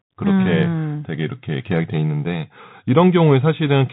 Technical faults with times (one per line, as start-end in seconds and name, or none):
0.00-3.92 Bluetooth CVSD headset codec